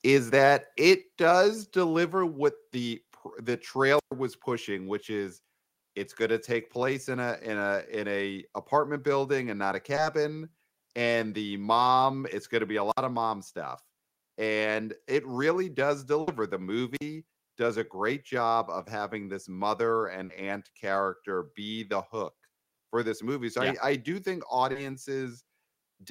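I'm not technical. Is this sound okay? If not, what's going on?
No, there are several problems.

Microphone overload, 0.37 to 0.51 s: the loudest part of the speech cracks and sounds harsh. The microphone's input was likely set too high, so the tops of those peaks were chopped off instead of recorded.

Microphone volume stepped down, at 1.02 s and again at 2.04 s: the voice and background suddenly get quieter, then quieter again. This fits call software reacting to that overly loud microphone by turning its input down in two separate steps.

Wireless microphone squelch dropout, at 3.97 to 4.12 s, 12.88 to 12.99 s and 16.95 to 17.01 s: the sound briefly goes hissy, cuts to near silence, then returns. The radio signal from the wireless microphone weakened, and the receiver muted it, for 125 ms the first time, 57 ms the second and 45 ms the third.

Short concealed packet loss, at 9.95 to 9.99 s, 20.25 to 20.31 s and 24.71 to 24.77 s: tiny smears or wobbles. 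Pieces of the call 20 to 40 ms long arrived too late, and the receiver patched each hole by stretching the sound just before it.

Burst of packet loss, 16.21 to 16.29 s: a slightly longer piece, 60 ms, went missing. The receiver held and faded out the last sound to cover it, then jumped ahead, so that bit of speech is simply gone.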